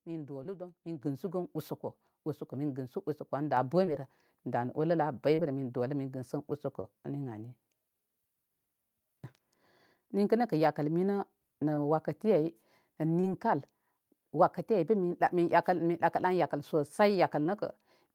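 Short concealed packet loss first appears at 0.43 s and returns at 3.85, 5.35, 6.81, 11.75, 13.21 and 17.43 s. Each time about 20 ms of speech, consistent with one lost 20 ms packet, never arrived, and the receiver filled the hole by carrying the preceding sound forward and blending back in. It is heard as a quick smear or wobble. On a spectrogram the harmonics freeze or turn into a blurred noisy patch for a few hundredths of a second, and the waveform repeats one cycle shape before rejoining.

Microphone volume stepped up at 1.02 s by about 8 dB and again at 3.57 s by about 3 dB, as the call software raised the input gain in a single jump. Voice and background noise get louder together, instantly. The waveform envelope widens abruptly at those points, and on a spectrogram the whole frequency range brightens from that moment on, including the noise floor between phrases.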